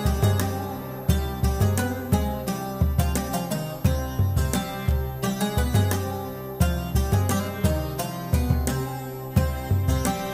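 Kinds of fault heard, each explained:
Switching supply whistle: a faint high whistle, wandering between 11.8 and 12.9 kHz, roughly 25 dB below the sound, from a switching power supply whining audibly.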